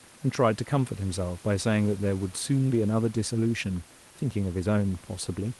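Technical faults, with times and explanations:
Nothing here counts as a technical fault: the room noise sits about 24 dB under the speech, and the call path's Opus coding tops out around 12 kHz, just as a normal call would.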